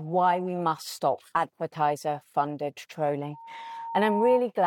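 At 3.33 s a loudspeaker feedback squeal begins: a steady tone near 920 Hz swells over roughly a second until it sits a few decibels above the rest of the sound, then stops at 4.43 s. A microphone was picking up the loudspeaker it fed, and at this one frequency the loop gain rose above unity, so each pass round the loop reinforced the tone.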